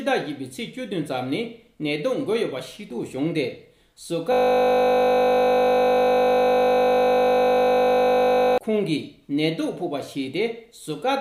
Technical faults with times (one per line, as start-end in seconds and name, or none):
4.32-8.58 system hang loop